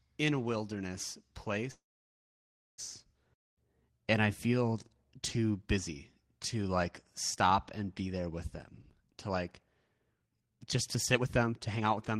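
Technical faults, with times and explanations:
1.71 to 2.80 s, call audio freeze: the speech stops and a short continuation of the last sound trails off into silence that lasts most of the roughly 1.1 s gap. This likely happened because packets were held up in transit and the jitter buffer ran dry, so the receiver briefly stretched what it last had and then waited. When the speech resumes it picks up exactly where it left off. Nothing is lost, but everything after this point arrives about 1.07 s later than before.
9.04 to 12.19 s, jitter buffer speed-up: the speech runs at about 127% of normal rate while its pitch stays unchanged, so it sounds hurried rather than higher. The receiver was holding more audio than it wanted, as happens once delayed packets catch up, and it trimmed many tiny slices, each one or a few pitch periods long, one after another. Around a second of audio is dropped this way over those three seconds, working off the built-up delay.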